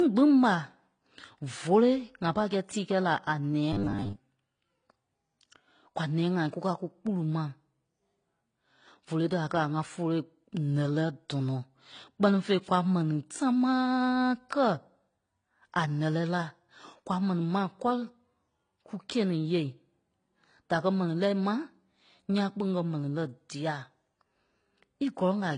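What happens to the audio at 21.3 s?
At 21.3 s the speech carries the same damage heard through the whole clip. Nothing remains above about 9.8 kHz, so the top end sounds dull. Two kinds of coding artefact are heard together. This is likely transcoding between lossy codecs, which fits a low-rate HE-AAC pass followed by AAC-LC. The second coder spent its bits re-encoding the first one's artefacts and added its own. The lower cut-off survived.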